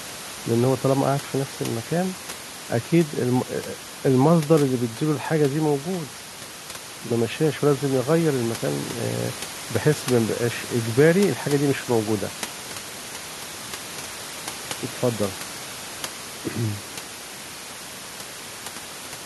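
Nothing in this speech recording points to a system fault, and the room noise, sitting about 17 dB below the speech, is part of the original recording rather than anything the signal chain added.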